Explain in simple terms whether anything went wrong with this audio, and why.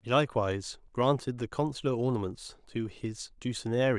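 Nothing went wrong with it.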